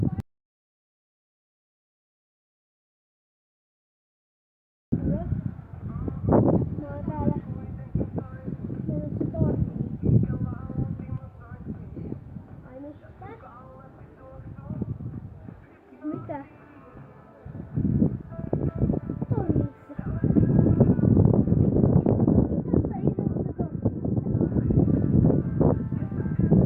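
Right at the start, from about 0.20 s to 4.92 s, there's an audio dropout to silence lasting roughly 4.7 seconds. The sound cuts off abruptly and the gap is dead digital silence, no room tone or hiss at all, before the audio snaps back in mid-flow at 4.92 s. That points to the input likely being lost, say a link dropping or a mute, while the recorder kept writing silence, so whatever happened in that stretch is simply gone.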